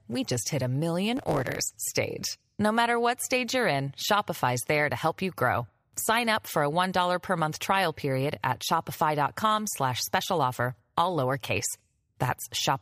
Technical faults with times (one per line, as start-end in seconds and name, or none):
1.16-1.91 block size mismatch (truncated)